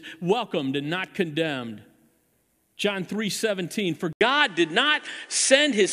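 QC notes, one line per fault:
4.13 to 5.93 s, input switched to a poorer device: after a short gap of about 80 ms the speech turns duller and boxier, with nothing above 10.5 kHz. The level shifts by roughly 5 dB and a new noise floor appears, sitting some 35 dB under the speech. This is likely the recording jumping to a different, more band-limited microphone, which brings its own tone, gain and background noise until the end of the clip.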